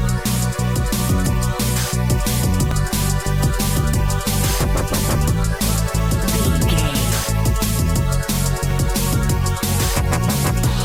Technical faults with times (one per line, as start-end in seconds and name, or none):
2.71 overlap between stream segments
8.71 overlap between stream segments